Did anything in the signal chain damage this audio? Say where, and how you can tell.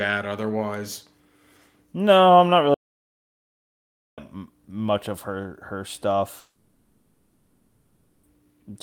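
Yes. An audio dropout to silence at 2.74–4.18 s, after "I'm not", flattens the waveform to silence and blanks the spectrogram until "much of her her", likely from input loss at capture.

A long network dropout at 6.39–8.28 s, after "much of her her", is filled with a smeared buzz continuing the last frame, showing as stretched, blurred bands where 1.84 s of real audio is missing.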